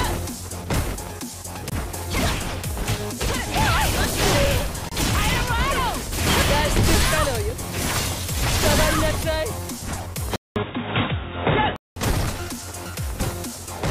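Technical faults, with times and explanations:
10.36 to 11.96 s, input switched to a poorer device: the recording likely jumped to a different, lower-grade microphone for this stretch before switching back. The change begins with a 0.2 s gap of silence. Through the switched section nothing reaches above 3.8 kHz, so the sound turns dull and boxy. The level also shifts by a modest amount, and a faint new hiss sits well below the signal, because the other device has its own gain and noise.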